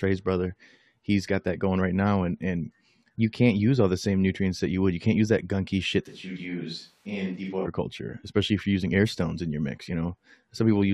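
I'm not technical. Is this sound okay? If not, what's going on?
No. From 6.09 to 7.66 s the speech turns roomy, thin and somewhat quieter, then snaps back: likely a switch to a distant microphone.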